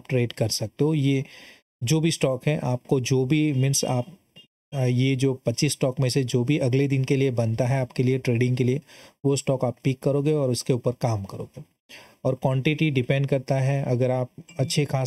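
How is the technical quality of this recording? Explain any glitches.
The quality is compromised by one fault that runs through the whole recording.

Channel delay (comb filtering), throughout: one channel arrives roughly 0.4 ms late, so summing to mono cancels shared content at a first notch near 1.5 kHz and evenly spaced frequencies above. The sound is hollow and phasey. A spectrogram shows fixed dark horizontal bands.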